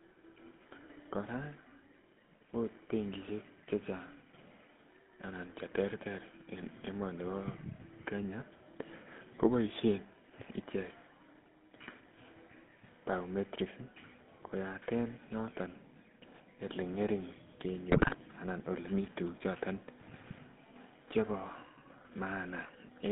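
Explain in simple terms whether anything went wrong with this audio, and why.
Two things went wrong. The whole recording has passed through the GSM full-rate codec, the speech coder used by early digital mobile phones. Instead of storing the sound itself, it stores a rough model of the throat and mouth and drives that model with a simplified pulse train. In this clip that simplification is plainly audible as a buzzy, gravelly roughness on the speech, and everything outside roughly 150 Hz to 3.6 kHz has been cut away, giving a thin, phone-like sound.

The second problem is GSM bit errors, heard twice. A weak radio link corrupted some of the data before it reached the decoder, so the decoder rebuilt the sound from wrong settings for pitch, loudness and tone. From 9.38 to 9.40 s there is a very short glitch, consistent with only a couple of damaged blocks. The bigger burst runs from 17.89 to 18.17 s, where the speech breaks up into squawks, pops and a gargling sound for about a quarter of a second.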